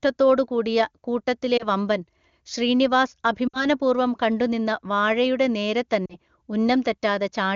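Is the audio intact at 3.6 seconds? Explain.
No. From 3.48 to 3.65 s the speech drops to near silence within two frames and returns weak or rough. These are lost AMR speech frames: the wideband decoder repeated the last good pitch and vocal tract settings at falling gain across a roughly 60 ms gap, consistent with three 20 ms frames.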